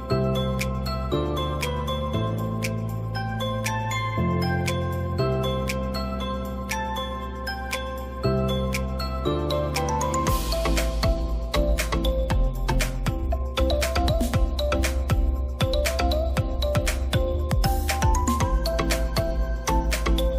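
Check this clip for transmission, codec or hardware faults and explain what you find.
One hardware fault runs through the whole clip: mains hum. From start to finish a steady low tone sits at 60 Hz, roughly 20 dB below the wanted signal. Power-line current is leaking into the audio path, most plausibly through a ground loop or a nearby transformer. It is heard as a constant drone under everything else. A spectrogram shows an unbroken horizontal line at 60 Hz, and in quiet stretches the waveform shows a regular 60 Hz ripple.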